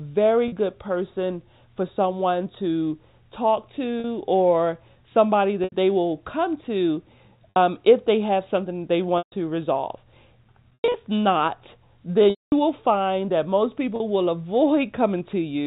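Packet loss with pitch repetition hits at 0.48, 4.0, 5.64, 7.5, 9.18, 10.74, 12.3 and 13.96 s, with gaps of 40 to 220 ms. The receiver loops the last pitch period to fill each hole, so the short ones come across as a brief buzzy hold. The 220 ms one at 12.3 s, just before "will find that most", fades toward silence before the speech cross-fades back in.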